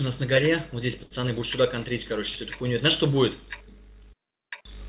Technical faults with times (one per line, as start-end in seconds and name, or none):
1.04-1.22 short stall from a late packet